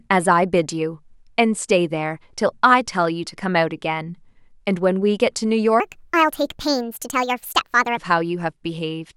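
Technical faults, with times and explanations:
5.80 to 7.97 s: section at the wrong speed. This stretch of speech plays 1.45 times too fast. Pitch climbs with it, by about seven semitones, so the speech turns high and hurried. Speed and pitch jump together at the start and fall back together at the end. Tempo and pitch moving as one points to playback at the wrong rate, not a pitch effect. The likely cause is an editor or player running this part against the wrong clock.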